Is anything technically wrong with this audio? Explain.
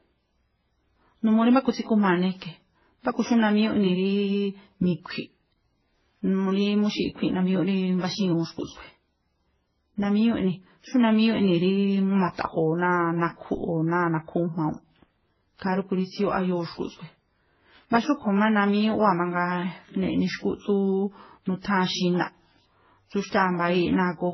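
Yes. Throughout, the speech has nothing above 6 kHz and layered codec artefacts, which point to transcoding between lossy codecs, likely several low-bitrate encodes ending in MP3.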